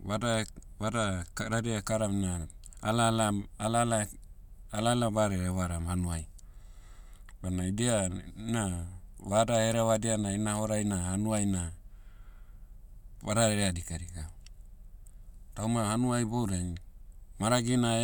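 Nothing stood out as a technical fault on listening to this speech recording.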